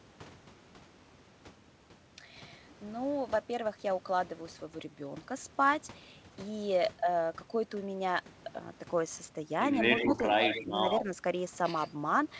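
From 9.72 s to 11.89 s, an echo leak appears as a delayed copy of the speech, trailing the original by about 119 ms. It comes at 9.72–9.79 s, 9.96–10.25 s, 10.41–10.64 s, 10.88–11.03 s and 11.77–11.89 s. It is about 20 dB below the speech at first, rises to roughly 5 dB below in the middle two stretches, and fades to about 10 and then 25 dB down. The likely cause is a far-end loudspeaker whose echo canceller let part of the pickup return. Unlike reverberation, the copy is a distinct repeat at a fixed lag rather than a smooth tail.

Overlapping these echoes, speech is suppressed in double talk at 10.06–10.17 s, 10.63–10.69 s and 11.01–11.09 s. The talker's own level dips by about 5 dB in short bites lasting about 70 to 100 ms. This is likely the canceller ducking everything while both sides were active. What separates it from the echo leak is that sound is taken away here, where the leak adds a second copy. 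Across the clip the band stops at 8 kHz, which fits a G.722 call path.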